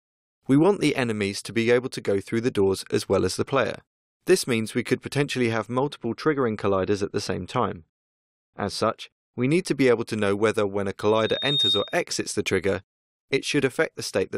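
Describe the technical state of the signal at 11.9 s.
At 11.9 s the signal is inside a loudspeaker feedback squeal running from 11.09 to 12.04 s. A microphone-to-speaker loop exceeds unity gain at 3.7 kHz, so a pure tone swells over about half a second and sits roughly 5 dB above the programme.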